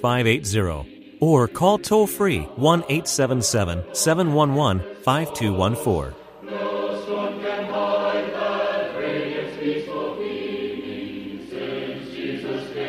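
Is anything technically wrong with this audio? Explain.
Yes, there is one loud pop, from about 1.87 to 1.90 s. A brief voltage step or pulse, likely from a plug, switch, static discharge or driver glitch, was added to the signal, and the following circuitry shaped it into a short burst. It sounds like a single sharp pop rising a few decibels above the sound, which continues underneath. On a waveform it is a narrow spike; on a spectrogram, a thin vertical stripe across all frequencies.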